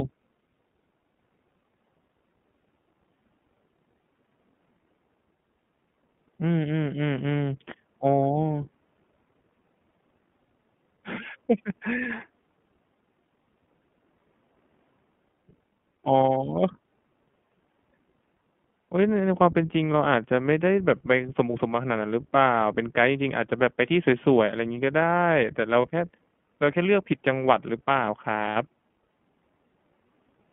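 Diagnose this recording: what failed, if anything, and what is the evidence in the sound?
The speech is confined to roughly 150 Hz to 3.4 kHz and carries a plainly audible rough, slightly synthetic texture throughout. That points to the codec stage: the iLBC codec, which codes each 20 ms frame's excitation independently, a character that fits its 15.2 kbps mode.

From 25.82 to 25.86 s, and again from 28.50 to 28.57 s, the speech briefly freezes into a held, buzzy vowel. These are lost iLBC frames on the network, 20 ms and then 60 ms, which fits one and then three missing frames. The decoder repeats the last pitch cycle mixed with noise to fill the gap, and because each frame stands alone, the voice is right again almost at once afterwards.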